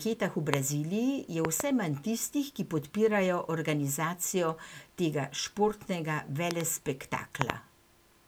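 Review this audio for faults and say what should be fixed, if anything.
Loud pops occur at 0.54–0.56 s (a single pop), 1.45–1.62 s (a double pop just before "manj tistih ki podpirajo"), 6.51–6.63 s (a double pop right after "podpirajo organizacijo tega športnega") and 7.42–7.52 s (another double). They peak about 20 to 25 dB above the speech, which continues underneath. The likely cause is a sudden voltage step from a loose plug, a switch or static, which the following circuitry shapes into a sharp thump. Secure connectors and avoid switching or handling cables while recording.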